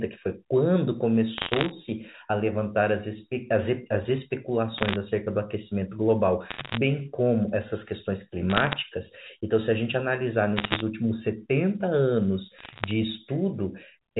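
Bit errors on a digital phone line flip individual bits in the 8-bit mu-law samples. Each flipped sign or high-order bit throws one sample far off its true value, so the speech carries bursts of sharp ticks that read as crackle laid over otherwise intact words. The bursts fall at 1.38–1.71 s, 4.78–4.96 s, 6.50–6.77 s, 8.50–8.73 s, 10.56–10.80 s and 12.58–12.91 s. They are densest around 10.6 s, at roughly one bit in a hundred or more, and sparsest near 12.6 s.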